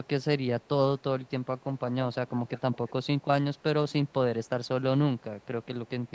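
A far-end echo canceller likely let loudspeaker pickup through in this speech, so an echo leak adds a faint delayed copy: 220 ms behind and about 25 dB down from 0.04 to 3.22 s, then fainter at 297 ms from 3.54 to 4.13, 4.44 to 4.68 and 5.18 to 6.12 s.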